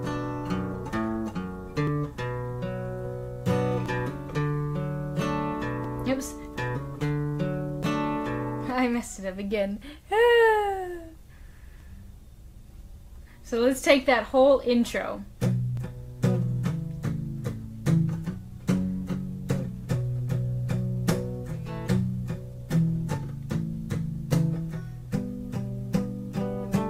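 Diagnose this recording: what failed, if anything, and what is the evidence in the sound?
The segmented stream was reassembled with overlapping time stamps at the segment boundaries, so the player trimmed audio that was never actually duplicated. Each trim removes roughly 5 to 8 ms, and the waveform jumps across the gap, producing a brief click or skip at 1.87, 3.86, 5.84, 7.83, 9.82, 11.80 and 15.77 s. Most of these fall about 2 s apart, matching a 2.0 s segment length, which identifies this as overlap between stream segments.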